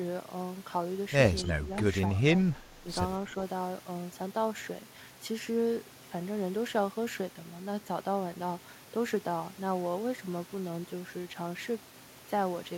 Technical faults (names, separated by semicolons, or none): speech suppressed in double talk